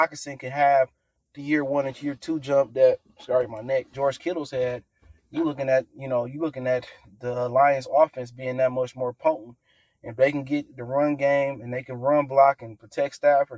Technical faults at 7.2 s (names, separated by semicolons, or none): sound cut by the noise suppressor